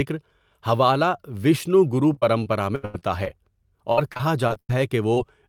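From 2.13 to 3.28 s the speech breaks up with repeated packet loss, giving that robotic sound. Audio keeps failing to arrive, and each hole gets patched by stretching the last bit of sound before the next one hits. About a quarter of that stretch is filler, with the longest gap around 85 ms, so it comes across choppy with bits missing. The same thing happens again from 3.92 to 4.75 s, slightly worse this time: about 30% of it is patched, and one gap runs to about 94 ms.

Right near the end, at 5.14 to 5.18 s, there's a short concealed packet loss. Roughly 20 ms never made it to the decoder in time, so the receiver carried the previous sound forward to cover the hole and then blended back into the real audio. It's just a quick smear or wobble, and a short consonant could get swallowed in it.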